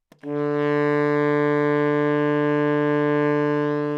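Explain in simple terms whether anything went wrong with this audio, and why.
Nothing went wrong; these sounds come through intact.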